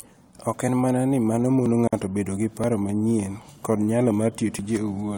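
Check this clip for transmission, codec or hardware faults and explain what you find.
Two kinds of fault are present in this speech recording: a regular series of tiny skips, and one short silent gap.

Audio missing between chunks: At 0.68, 1.66, 2.64, 3.61 and 4.59 s, the speech jumps forward slightly, as if a sliver of sound vanished and the two sides were butted together. Each loss is around 20 ms, and the skips repeat roughly once per second. The likely cause is a recorder or processor handling audio in one-second chunks and dropping a little while it finishes one chunk and starts the next.

Gap at a join of encoded pieces: From 1.88 to 1.93 s, a 50 ms silence cuts into the speech with smeared edges, and the sound resumes from exactly where it stopped, with nothing lost. This comes from joining separately encoded pieces without trimming them. The encoder's start-up delay and the padding on its last frame both remain as dead air at the seam. 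The four-second spacing points to pieces of that length, so only this one seam falls within the clip.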